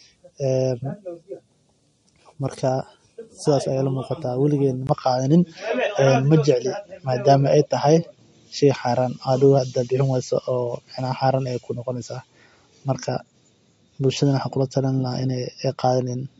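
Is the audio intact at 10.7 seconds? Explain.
No. Two faults are present at 10.7 seconds.

MP3 compression runs through the whole clip. Nothing is heard above about 11.2 kHz, and weak detail flickers in and out, giving a watery, swirly edge to the speech. The damage is plainly audible. It likely comes from heavy MP3 encoding at a low bitrate, which fits about 48 kbps.

The input switched to a poorer device at 4.87 s and stays that way to the end. A 20 ms gap marks the switch. After it, the band stops near 7.6 kHz, so the sound turns duller and boxier. The level shifts by a few decibels, and a faint new noise floor appears well below the speech. The likely cause is a change to another microphone or a headset's call mode.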